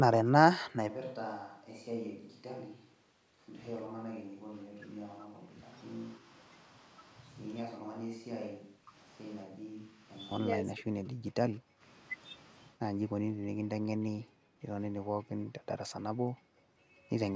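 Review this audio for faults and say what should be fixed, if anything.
From 0.90 s to 10.31 s the speech turns hollow and roomy, thinner in the bass and about 10 dB quieter, with room noise only about 30 dB below it. This is likely a switch to a distant microphone after the close one dropped out. Keep the close microphone's signal monitored and backed up so the recording never falls back to a far one.

Between 3.86 s and 11.83 s the speech dips, dulls or breaks up at 3.86–5.62 s, 6.19–6.25 s, 7.73–8.94 s, 9.45–10.08 s and 10.63–11.83 s. The drops reach about 40 dB, and the 6.19 s dip is shallower, near 10 dB. This is likely speech suppressed in double talk: with both sides talking, the echo canceller mistook the local talker for loudspeaker echo and attenuated it. Use headphones or an echo canceller with better double-talk handling.

At 14.33–14.58 s and 16.41–16.57 s the room background abruptly vanishes, falling by about 40 dB, then returns. 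This is background gated by the echo canceller, which clamped the microphone hard while the loudspeaker was playing. Tune the canceller's suppression to be gentler, or use comfort noise to fill the gaps.

At 15.46–15.51 s a faint scrap of the voice returns roughly 209 ms late, about 35 dB below the speech. This is an echo leak, likely loudspeaker sound that the far side's canceller failed to remove and sent back. Have the far end lower its speaker volume or switch to headphones.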